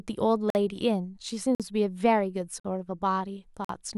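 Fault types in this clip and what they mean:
gap between chunks: The speech arrives in pieces roughly one second long, and silence is inserted at each join, so nothing is lost but the flow breaks. Here four hard-edged holes of about 48 ms fall at 0.50, 1.55, 2.60 and 3.65 s, recurring about every 1.05 s. On a waveform each is a flat silent stretch with abrupt edges; a spectrogram shows matching narrow vertical blank columns across all frequencies.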